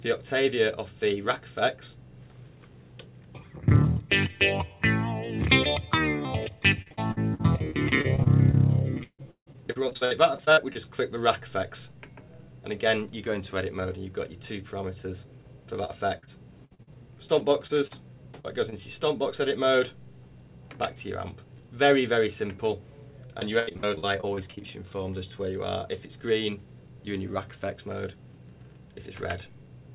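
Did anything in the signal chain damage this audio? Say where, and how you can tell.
Yes. Three stretches sound choppy and robotic, with short smears where sound should continue: 6.82 to 10.77 s, 15.85 to 18.82 s, and 23.27 to 24.62 s. The first is worst, with around two dozen holes, the longest 154 ms. This is repeated packet loss in the network stage. Each lost or late packet was patched by extending the previous sound, covering about a quarter of the first and third stretches. The band stopping near 4 kHz fits a G.711 call path.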